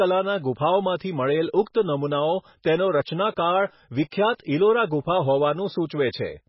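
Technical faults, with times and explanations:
Throughout, MP3 compression: the speech has nothing above 5.5 kHz and a heavily damaged, watery swirl, likely from an MP3 encode at a bitrate near 16 kbps, where the encoder cuts the treble and lets weak frequency lines flicker between frames.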